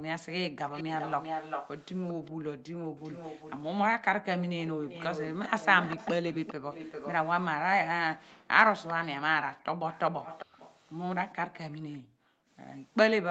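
From 0.72 to 2.31 s a delayed copy of the speech trails about 0.4 s behind, only a few decibels below the direct sound. This echo leak likely comes from a loudspeaker on the far side whose echo canceller let part of its microphone pickup through. From 2.31 to 2.9 s the room sound falls away sharply, close to 40 dB at its deepest, for about a third of a second, then returns. This is background gated by the echo canceller, which turned the microphone down hard while the loudspeaker played. The echo returns more faintly from 2.98 to 3.55 s and more strongly from 4.41 to 7.14 s, roughly 10 dB under the speech, always with the same 0.4 s lag. The background gates out again from 8.19 to 8.47 s, dropping nearly 40 dB for a fraction of a second. A brief faint echo scrap follows at 8.9 s, then a quieter echo stretch from 9.92 to 11.98 s. A last gated dip of about half a second runs from 11.99 to 12.49 s.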